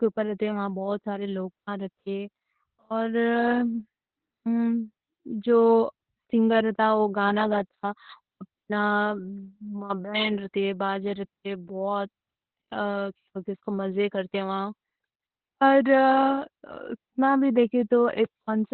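From start to finish the speech carries heavy Opus voice compression. Nothing gets through above 4.3 kHz, so it sounds muffled and boxed-in, and the coarsely coded excitation adds a hoarse, faintly robotic edge. That fits narrowband SILK at a very low bitrate, around 8 kbps.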